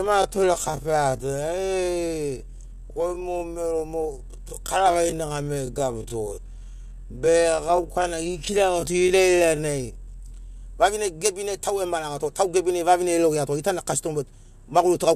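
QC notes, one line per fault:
0.0 to 10.6 s, time-stretched section: the speech was likely slowed to about 0.61 times its speed by repeating short pieces to keep the pitch, so the pace drags before it jumps back to normal at 10.6 s.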